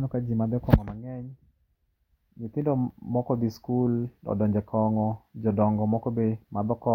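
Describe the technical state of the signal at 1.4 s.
At 1.4 s the speech signal is intact, with no audible fault at that point.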